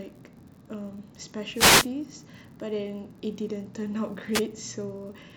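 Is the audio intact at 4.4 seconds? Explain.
No. From 4.32 to 4.42 s there is a wireless microphone noise hit. The radio link of the FM microphone briefly fades as reflected signals cancel. Receiver noise rises and covers the speech, heard as a short swish of static. Throughout the clip, including this moment, there is also an unreliable data bit. One data line is marginal, so its bit flips in a random share of samples. Each error adds a spike of about -41 dBFS, heard as a steady fizzing crackle.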